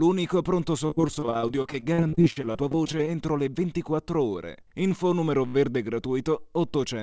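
From 0.86 to 3.07 s the audio breaks up with repeated packet loss, giving a robotic sound. Packets keep going missing or arriving late. Each hole is bridged by stretching the last sound forward, and then the next hole arrives. About 30 percent of this stretch is patched rather than real, and no single gap runs longer than 48 ms. The result is choppy, with small pieces of sound missing throughout.

At 5.47 s a repeated buffer appears, lasting until 5.54 s. Fresh audio fails to arrive in time, so the playback device loops the last short block it holds. Each repeat is 16 ms long, which fits a 256-sample buffer. The block sounds five times in a row, joined hard each time. Because the block is so short, this comes across as a click or brief buzz rather than a clear stutter. The call path's codec limits the audio to nothing above 8 kHz.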